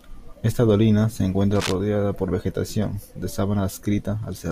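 A short burst of scratching, rustling noise cuts across the speech from 1.55 to 1.75 s, dense and uneven, sitting not far below the voice at roughly 10 dB under it. This is cable scratch noise, likely from a worn cable, plug or control being moved, so that its contact resistance jumps about rapidly for that fifth of a second and sprays irregular noise bursts into the signal before the connection settles again.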